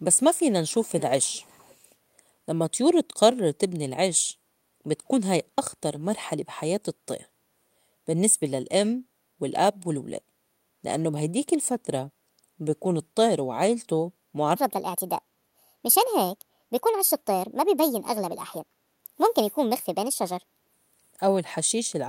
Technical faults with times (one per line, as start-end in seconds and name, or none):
0.18-1.94 echo leak
4.38-4.82 background gated by the echo canceller
9.09-9.24 background gated by the echo canceller
12.30-12.57 background gated by the echo canceller
14.55-20.73 section at the wrong speed